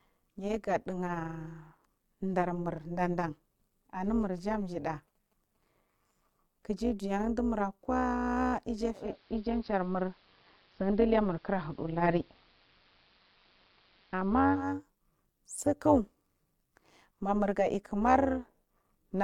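Overlap-add ripple runs throughout: frames rejoined with mismatched overlap swing the level about 11 dB around 200 times a second, giving a rough, buzzing tremolo over the speech.

Digital radio blending to analogue occurs from 8.93 to 14.79 s: over 244 ms the receiver crossfades to AM, adding faint hiss and shifting level about 1 dB.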